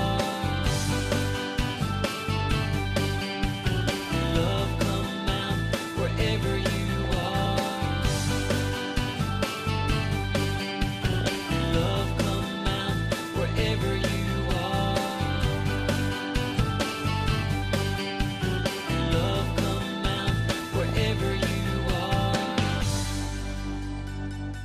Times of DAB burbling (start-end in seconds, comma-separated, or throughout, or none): 6.98-7.46, 11.01-11.36, 20.80-20.95